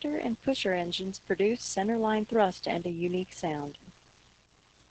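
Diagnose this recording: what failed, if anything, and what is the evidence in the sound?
Muffled, hoarse, slightly robotic speech throughout, nothing above 8.8 kHz: codec-stage Opus voice compression, SILK coarsely coding excitation, consistent with about 10 kbps wideband.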